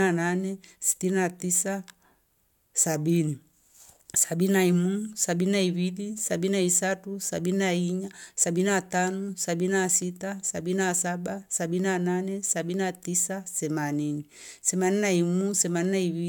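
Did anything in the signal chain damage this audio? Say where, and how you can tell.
No, nothing in this speech recording stood out on listening as damage from any stage of the signal chain.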